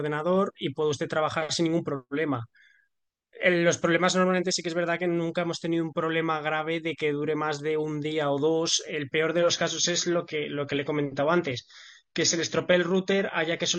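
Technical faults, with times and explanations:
9.39–13.78 s, adaptive stream at a lower bitrate: the treble abruptly vanishes above 10.3 kHz with no gap and codec artefacts rise, which fits a switch from about 96 to 24 kbit/s AAC.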